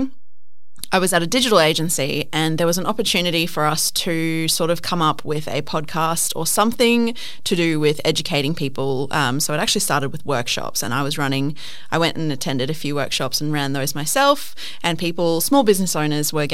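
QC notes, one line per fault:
Throughout: DC offset. Nothing in the speech itself gives it away, since a constant shift carries no audible tone, but the whole waveform sits off-centre from zero by about -25 dBFS, and the spectrum shows steady energy pinned at the very bottom, at 0 Hz. That fixed shift eats into headroom on one side, leaving less room before peaks in that direction would clip, and a later edit or gate could turn the step into a click.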